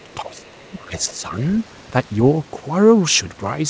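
From the start to 1.33 s, the speech dips by as much as roughly 20 dB for about a second in total, thinning and breaking up. This is likely speech suppressed in double talk, with the echo canceller attenuating the talker while both ends were speaking.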